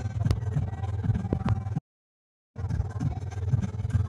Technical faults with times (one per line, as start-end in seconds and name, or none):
0.31-0.33 loud pop
1.33-1.51 loud pop
1.78-2.57 playback stall